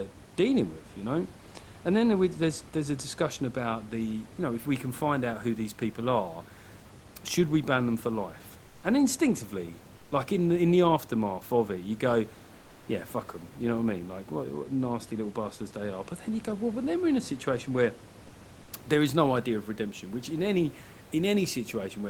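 At 8.67 to 8.83 s, 9.97 to 10.11 s, 12.57 to 12.87 s and 18.63 to 18.71 s, short pauses in the speech lose their textured room noise and fill instead with a flat, featureless hiss, about 2 to 4 dB quieter, lasting 160, 140, 300 and 80 ms. This is comfort noise in place of the background, likely from discontinuous transmission such as Opus DTX, where the sender stops sending during silence and the receiver synthesises smooth noise until speech resumes.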